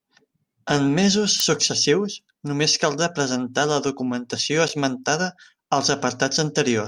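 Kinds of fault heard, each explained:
Electrical switching spike at 1.40 s: a sharp snap lands on top of the speech just before "successius només caldrà presentar", rising to around -5 dBFS. Lasting only a few milliseconds, it sounds like a brief electrical arc rather than anything acoustic. The likely cause is a nearby switch, motor or static discharge sending a short burst of interference into the audio line, which records it as an added crack.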